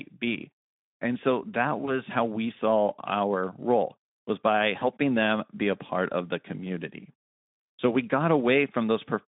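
At 1.85 s and 4.79 s there is VoIP packet loss concealed by the speech codec. One 20 ms frame drops out each time, and the decoder extrapolates its last pitch and filter, stretching the speech into a buzzy tone or coloured noise that fades and recovers by 2.01 s and 4.84 s.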